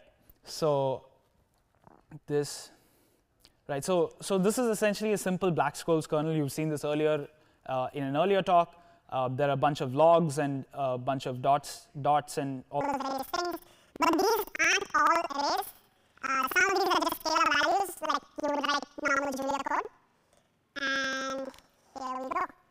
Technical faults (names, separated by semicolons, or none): planar audio read as interleaved